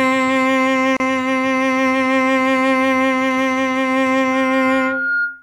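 At 0.97 s the music drops out for about 33 ms and resumes at 1.00 s where it left off. This gap at a join of encoded pieces comes from separately encoded 4-second segments spliced untrimmed, so encoder delay and final-frame padding remain as silence with smeared edges.

From 4.32 s to the end, a loudspeaker feedback squeal appears: a steady 1.4 kHz tone swells over roughly 0.7 s to about the level of the music. A microphone is picking up its own loudspeaker, and the loop gain at that frequency exceeds unity, so the tone keeps reinforcing itself.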